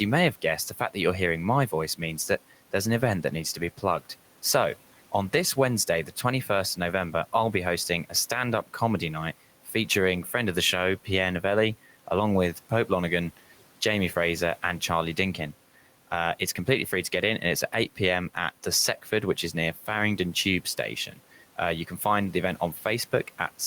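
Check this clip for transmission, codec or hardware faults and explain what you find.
One system fault recurs: speech cut by the noise suppressor, heard at 0.33–1.99 s (between "you may" and "that there's an event"), 6.06–11.07 s, 12.55–14.82 s and 16.39–23.39 s. The suppressor mistook parts of the speech for the room noise, which sits about 23 dB below the speech, and pulled them down by about 9 to 12 dB. This leaves scattered moments, from a tenth of a second to over half a second per stretch, where soft consonants and word endings sound faint and swallowed.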